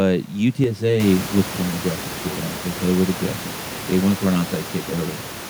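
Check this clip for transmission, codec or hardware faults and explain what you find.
One fault is present. Channel delay (comb filtering) runs from 0.64 s to the end. One channel lags the other by around 10 ms before the two are summed to mono, so shared content cancels at evenly spaced frequencies from around 50 Hz upward, giving the speech a hollow, phasey colouring. The room noise that rises by about 16 dB near 1 s is part of the recording, staying about 15 dB below the speech.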